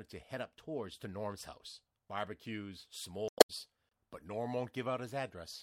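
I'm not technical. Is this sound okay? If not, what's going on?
No. There is damaged data in the compressed stream at 3.28 to 3.50 s, about a fifth of a second. The audio was stored in a compressed format, and a small stretch of that stored data got corrupted, with bytes lost or overwritten. When the player reaches that spot it can't make sense of the data, loses its place, and hunts for the next readable piece, so you hear a brief garbled glitch there.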